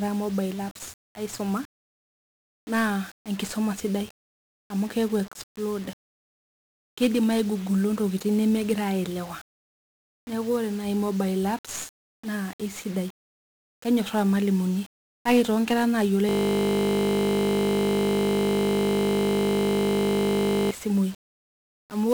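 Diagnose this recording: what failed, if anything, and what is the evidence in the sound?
The whole recording is fuzzy and crackly, with a dense broadband hiss riding on the speech and the upper treble buried under it. That points to the codec stage, specifically 1-bit DFPWM compression. Each sample carries a single bit that nudges an adaptive level up or down, so the waveform is only approximated in coarse steps. The heavy quantisation noise fits a stream of roughly 48 kbps.

From 16.29 s to 20.71 s, straight after "kake toonkera naayiolo", the speech gives way to a steady, hard buzz at 50 Hz. A single 20 ms slice of audio is repeating exactly, over two hundred times. This is a system hang loop at the driver or buffer stage. The host stopped supplying new data while the audio hardware kept replaying the same short ring buffer, which fits a buffer of about 20 ms.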